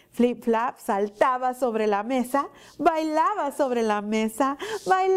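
No dropouts, clicks, distortion or timing faults turn up anywhere in the recording.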